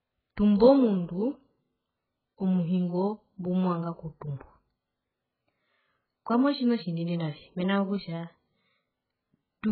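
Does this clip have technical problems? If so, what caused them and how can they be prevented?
Yes. The speech was likely squeezed through AAC compression at a very low bitrate, which fits AAC-LC at around 8 kbps. Throughout, nothing remains above 4.5 kHz, so it sounds dull and heavily smeared, with a warbling, fizzy texture. Encoding at a higher bitrate prevents this.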